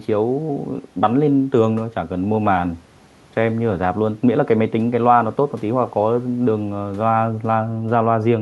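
Nothing stood out on listening to this speech recording.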